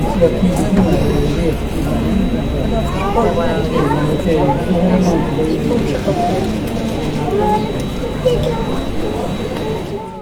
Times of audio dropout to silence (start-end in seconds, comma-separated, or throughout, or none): none